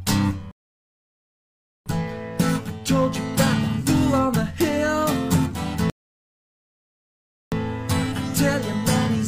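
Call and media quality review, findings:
Rebuffering stall, 0.51 to 1.86 s: audio drops to dead silence, then picks up exactly where it left off. Adds about 1.34 s. Player buffer ran dry, waited on the download.

Rebuffering stall, 5.90 to 7.52 s: same deal, clean cut to silence and a seamless resume, nothing skipped. Adds about 1.62 s. Delivery isn't keeping the playback buffer fed.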